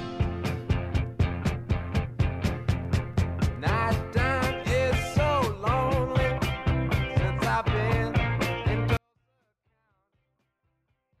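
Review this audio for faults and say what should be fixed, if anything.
A 24-bit alignment error (too quiet) runs from 8.97 s to the end: the sound stays clean but abruptly falls about 48 dB, near inaudible. The 24-bit samples sit in the low bytes of each 32-bit word but are read as full 32-bit integers, making every value 256 times too small. To prevent it, declare the sample format explicitly so 24-in-32 data is shifted into the high bytes before being treated as 32-bit.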